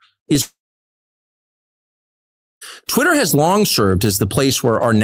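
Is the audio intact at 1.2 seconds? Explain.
No. At 1.2 seconds the speech is gone, inside a gap running from about 0.41 to 2.63 s. The last sound before the break trails off into a brief fading buzz or hiss, and almost the whole stretch is then plain silence or a faint steady noise until the speech resumes with roughly 2.2 s of it simply missing. This is likely a long network dropout: packets stopped arriving, the receiver briefly extended the final sound, then gave up and filled with quiet.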